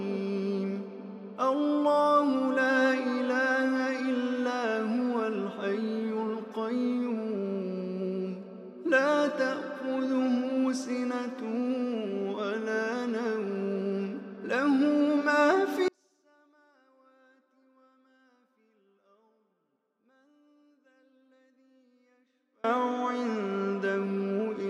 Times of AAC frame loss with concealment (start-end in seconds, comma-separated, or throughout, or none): none